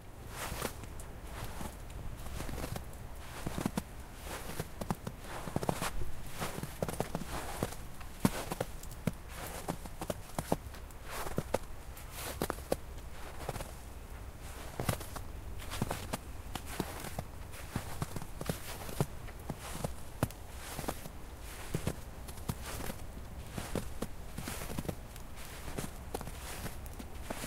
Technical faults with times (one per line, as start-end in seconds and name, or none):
10.27 skip ahead
10.44-12.76 jitter buffer speed-up